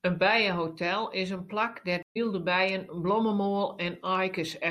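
At 2.03 to 2.17 s, just after "bijehotel is in plak", a stream reconnect occurs: the connection dropped, about 0.13 s of silence follows, and a fresh decoder picks up the stream roughly 0.15 s further on, so speech resumes at "bijen blommemoal" with material skipped.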